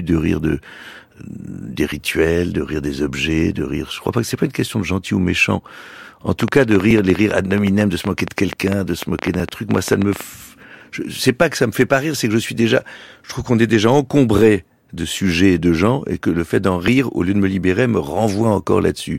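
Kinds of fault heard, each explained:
Audio missing between chunks: The speech jumps forward at regular 2.5 s intervals, at 4.41, 6.91, 9.40, 11.89, 14.39 and 16.88 s, each skip losing only a few milliseconds with the two sides butted together. This is likely a recorder or processor dropping samples while switching chunks. One falls between "crois pas que c'est" and "une question de gentil", another between "que ça me fait" and "rire c'est que je". Unlike clicks, sound is removed rather than added, and the spacing is strictly even.
Train of clicks: From 6.40 to 10.22 s about forty similar-shaped pops tick over the speech at around 9 per second, at an uneven pace, with peaks roughly 10 dB above the speech. They are likely caused by interference from nearby equipment or a faulty connection or power supply. Unlike the chunk skips, nothing is lost; the pulses sit on top of the sound, pauses included, and their spacing wanders instead of repeating exactly.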